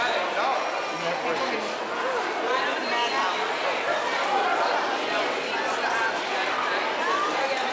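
No technical faults can be heard in this audio.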